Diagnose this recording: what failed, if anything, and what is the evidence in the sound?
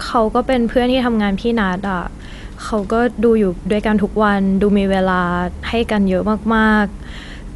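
At the codec stage, the speech was most likely squeezed through Dolby Digital compression at a rate that fits a 64 kbps stream. Nothing remains above 11.4 kHz, so the sound is dull, and the damage is plainly audible throughout as rough, fluttering noise where starved frequency lines are filled with dither.

In the analogue wiring, a ground loop or nearby transformer let mains hum into the signal from 0 to 3.44 s. It is a steady 50 Hz tone with low harmonics, sitting roughly 35 dB below the speech, and then it stops.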